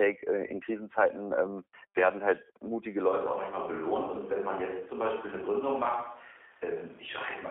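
The whole clip passes through a G.729 codec, which fits an 8 kbit/s G.729A coder. The speech is rebuilt from a vocal-tract filter, a pitch predictor and a few pulses per frame, and confined to a 300 Hz to 3.5 kHz line band. Plainly audible damage makes the voice rough, thin and synthetic throughout.

From 0.47 to 0.52 s, VoIP packet loss concealed by the speech codec occurs. About 20 ms of audio goes missing, which fits two lost frames. The decoder extends its last pitch and filter with falling gain, so the sound smears into a brief, fading stretch of the previous sound.

From 3.09 s to the end, the audio switches to a distant microphone, likely because the close microphone dropped out. The voice abruptly becomes roomy and hollow, with less bass, a few decibels quieter, and faint room noise well below the speech.

At 4.06 to 4.10 s, a second concealed packet loss removes about 10 ms, which suggests a single lost frame. 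The decoder again stretches the previous sound into a short blur before normal decoding resumes.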